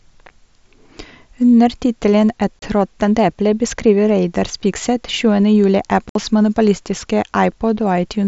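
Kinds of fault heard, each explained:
unconcealed Bluetooth headset packet loss: Two short holes with abrupt edges, near 2.60 s and 6.09 s, the second about twice as long. Voice packets between headset and phone went missing and were replaced by silence or filler, with nothing smoothing over the gaps.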